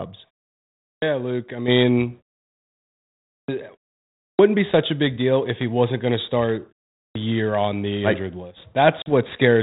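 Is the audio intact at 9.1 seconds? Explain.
No. Packet loss on an ADPCM call hits from 9.02 to 9.13 s. About 40 ms of audio, a couple of packets, drops to a hard-edged silence. The decoder's predictor and step size lose track, so the speech returns slightly distorted before settling.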